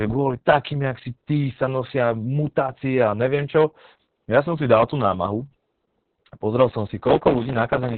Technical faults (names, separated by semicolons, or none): Opus voice compression; block size mismatch (truncated)